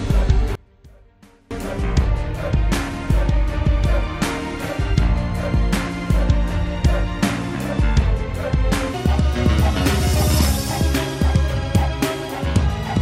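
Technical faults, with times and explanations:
0.55–1.51 s, one channel inverted: The sound suddenly drops by about 29 dB, collapsing into a faint remnant where what the channels share almost disappears, then returns at full strength. This is likely one stereo channel with reversed polarity. When the two channels are summed to mono, whatever they share cancels, leaving only the small difference between them. That is why the material shrinks to a faint trace for just under a second.
8.94–13.02 s, section at the wrong speed: From here to the end, the sound runs hurried and noticeably higher, with everything pitched up by roughly five semitones and moving 1.39 times faster than before. Tempo and pitch rise together, which is the signature of playback at the wrong rate rather than a deliberate pitch shift. This section was likely rendered or played against the wrong clock, so it is both compressed in time and raised in pitch.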